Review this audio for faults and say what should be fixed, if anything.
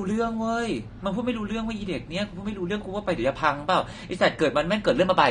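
The speech is band-limited with nothing above 9.7 kHz, and it sounds dull and smeared with a warbly, fizzy texture on sibilants across the whole clip. This is likely AAC compression: AAC-LC at a low bitrate, consistent with around 32 kbps. Encode at a higher bitrate or keep a lossless master for delivery.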